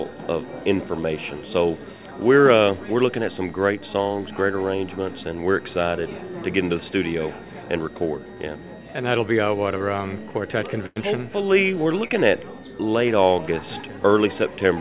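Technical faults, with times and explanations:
9.78–9.82 s, short concealed packet loss: about 20 ms never arrived in time, so the receiver stretched the preceding sound across the hole, leaving a quick smear.
10.86–10.98 s, burst of packet loss: roughly 100 ms went missing in a row. The decoder held the last sound while fading it, then jumped ahead past the lost stretch.
12.08–12.12 s, short concealed packet loss: another 20 ms dropout, patched by continuing the prior sound, so you hear a brief wobble where the real audio should be.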